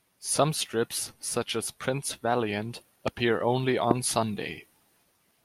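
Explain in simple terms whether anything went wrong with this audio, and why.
Yes, something went wrong. There are two loud pops in the speech, at 3.08 to 3.10 seconds and at 3.91 to 3.93 seconds. The second is louder. Each is a sudden electrical jolt, likely from a plug, switch or static. The speech carries on underneath.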